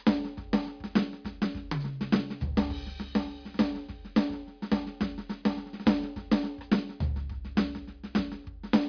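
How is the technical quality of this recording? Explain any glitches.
The music recording comes through without any technical faults or glitches to explain. Nothing in the audio suggests a problem anywhere in the clip.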